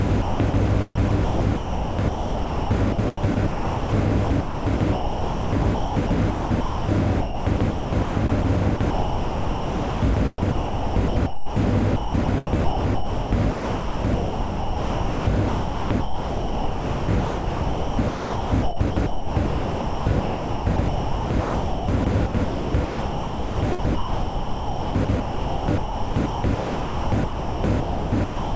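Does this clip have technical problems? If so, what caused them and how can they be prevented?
Yes. The sound is chopped by the voice detector at 0.22–0.54 s, 0.96–3.93 s, 4.25–6.89 s, 7.21–8.45 s, 8.77–11.56 s and 11.96 s to the end. Within each stretch, portions totalling 0.22 s, 1.84 s, 1.72 s, 0.7 s, 2.04 s and 12.7 s are replaced by synthetic comfort noise. The likely cause is a sender-side voice detector repeatedly misjudging this non-speech sound as silence. The audio passed through a call path with nothing above 8 kHz, which fits G.722 at 64 kbps. To prevent the chopping, disable voice-activity detection or discontinuous transmission for non-speech material, or lower its threshold.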